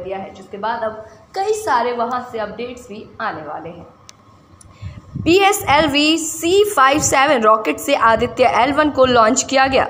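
No dropouts, clipping, glitches or other transport or processing faults are audible anywhere in the recording.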